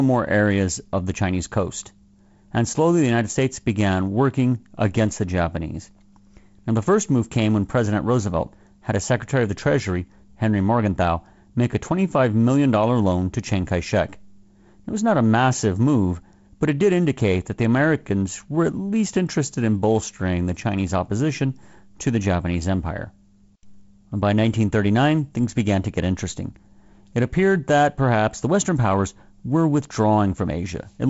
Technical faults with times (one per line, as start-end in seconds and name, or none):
none